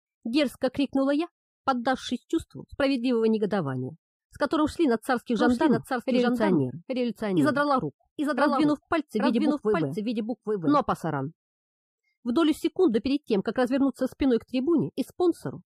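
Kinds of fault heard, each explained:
doubled audio track: a full-band copy trails by about 0.7 s, a few dB down; unlike echo, it never decays and starts and stops abruptly.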